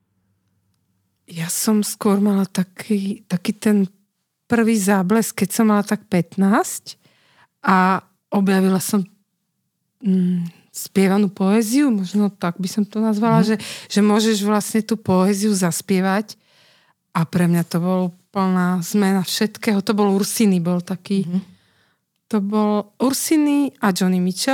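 No dropouts, clicks, distortion, level jumps or other playback faults can be heard anywhere in the recording.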